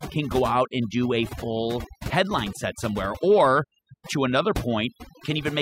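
Overdone noise removal runs throughout the speech. The noise reduction was set too aggressively, so frequency bands near its noise estimate are pushed down or switched off, taking quieter voice detail with them. The background drops and breaks up into twinkling specks.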